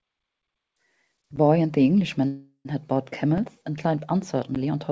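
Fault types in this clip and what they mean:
Block of digital silence: Three abrupt dropouts: tick-like holes of about 10 ms at 1.36 s and 4.55 s, and a shorter 3 ms one at 3.38 s. Samples were replaced by zeros, probably because the output buffer was not filled in time.
Call audio freeze: From 2.28 to 2.72 s the sound stretches into a fading buzz for about 370 ms, with roughly 90 ms of silence, then picks up where it stopped with nothing lost. The likely cause is delayed packets emptying the jitter buffer.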